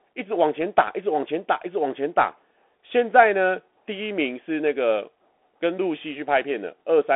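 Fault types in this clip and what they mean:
Bluetooth CVSD headset codec: the speech has gone through a one-bit up-or-down coder running at 64 kHz, so it's boxed into a telephone band of about 200 Hz to 3.4 kHz with nothing above 3.8 kHz, and the damage is plainly audible as scratchy s sounds and granular hiss.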